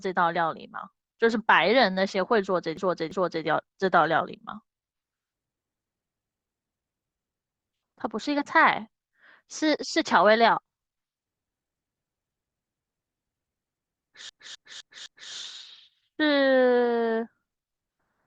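At 2.77 s the speech stutters with repeated frames: a 341.3 ms block plays twice more, ending at 3.46 s and adding 682.7 ms. At 14.29 s a 256.0 ms block repeats four extra times through 15.32 s, adding 1024.0 ms. In each case a run of compressed frames was written or sent more than once, so the decoder replays the same fraction of a second back to back and the clip runs longer by that amount.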